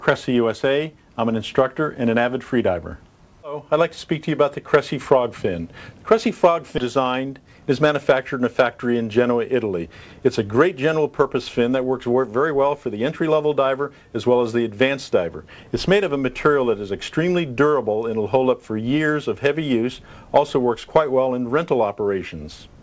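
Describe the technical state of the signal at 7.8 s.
At 7.8 s the signal is in a jitter buffer speed-up from 7.40 to 8.13 s. Short pitch-period segments, roughly 50 ms in total, are dropped, so the sound runs about 7% fast at unchanged pitch.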